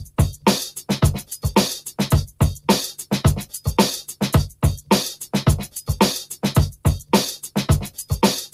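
Noise suppressor applied to music or sounds, throughout: a suppressor built for speech treats steady tones and ambience as noise, so level swings by around 10 dB. Held sound and tails sink while attacks pass, giving a pumping, thinning character.

Sample clock jitter, throughout: the converter clock wanders by around a microsecond, so samples land slightly off time. The error, some 35 dB below the signal, is heard as a fine hiss or roughness that grows on loud, bright passages.

Sound cut by the noise suppressor at 0.05 to 0.45 s, 3.45 to 3.61 s, 5.67 to 5.83 s, 6.72 to 7.12 s and 7.89 to 8.05 s: the suppressor mistakes these sustained or decaying stretches for noise and pulls them down by 12 to 15 dB, so they dip audibly or their decays are cut short.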